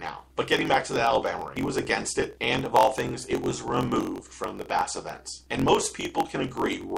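A block size mismatch (truncated) runs through the whole clip. The audio carries a steady buzz at about 46 Hz and plays 1.07 times fast at roughly normal pitch. Each block loses its tail before the next stage reads it, which fits 1024-sample blocks being written.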